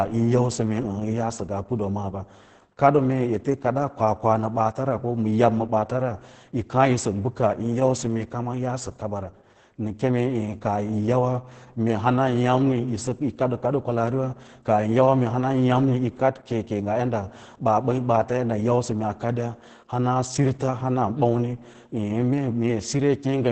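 Throughout the speech, Opus voice compression in SILK mode codes the excitation very coarsely, pointing to a bitrate around 10 kbps. Nothing survives above about 8.7 kHz, so the voice sounds muffled, hoarse and slightly robotic, with heavy codec damage.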